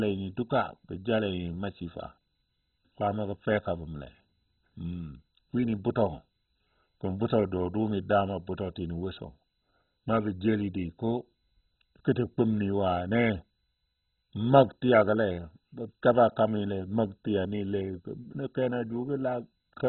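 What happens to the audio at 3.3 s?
At 3.3 s the speech is still carrying what is likely heavy MP2 compression, present across the whole clip. Too few bits, fitting a rate near 16 kbps, switch off every sub-band above 4.1 kHz and coarsely quantise the rest, so the speech sounds dull, gurgling and granular.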